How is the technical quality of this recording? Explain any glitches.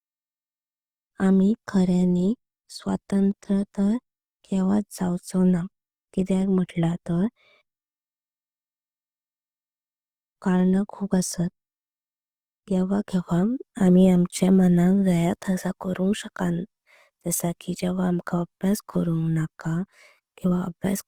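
The recording has one problem, running through the whole clip: audible low-bitrate lossy coding, most likely Opus compression.

Opus compression, throughout the clip. Short of bits, the encoder keeps the energy in each frequency band but rebuilds the fine detail inside many bands by copying lower bands or filling them with noise. The full bandwidth is kept, so the sound isn't muffled. Instead, the speech has a grainy, rough, noisy texture that stays plainly audible, which fits the music mode of the codec at a low rate of around 24 kbps.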